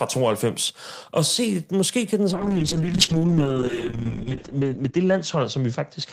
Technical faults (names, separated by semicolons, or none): call bitrate drop